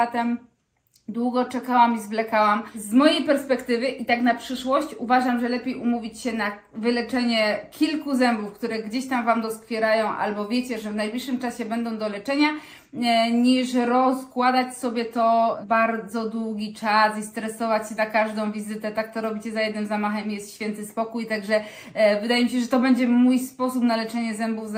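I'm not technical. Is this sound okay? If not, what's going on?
Yes, this one sounds fine: nothing skips, crackles or drops out anywhere along the way, so there's nothing here to worry about.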